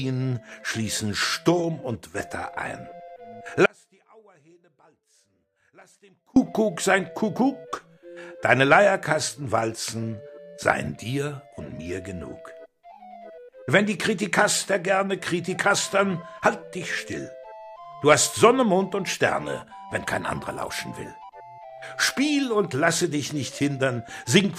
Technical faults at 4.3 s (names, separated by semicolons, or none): audio dropout to a faint residue